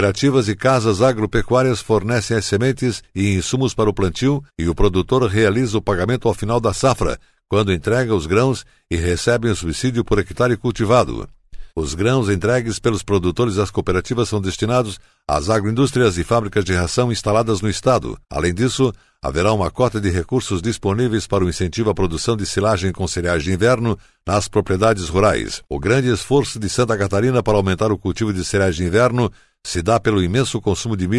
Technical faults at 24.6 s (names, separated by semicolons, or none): none